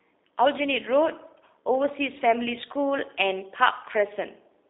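From start to finish the speech has passed through a G.729 codec, here the lighter G.729A form. The sound is rebuilt from a vocal tract filter, a pitch predictor and a handful of pulses per frame, which fits an 8 kbit/s stream. The band is held between 300 Hz and 3.7 kHz, so the speech sounds thin and boxy, and the coding damage is plainly audible as a rough, buzzy, synthetic edge.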